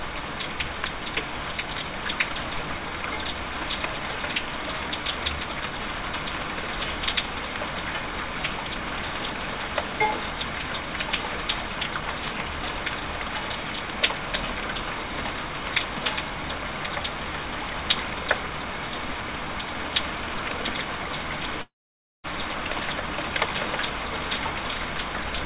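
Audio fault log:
21.62–22.26 s, long network dropout: about 0.62 s of the sound is missing, and the gap is filled mostly with silence, about 0.54 s of it, before the audio resumes further on with the lost part skipped. This likely comes from packets failing to arrive: the receiver briefly carries the last sound forward, lets it die away to silence, then rejoins the live stream. Either side, nothing above 4 kHz, which fits a G.711 mu-law call path.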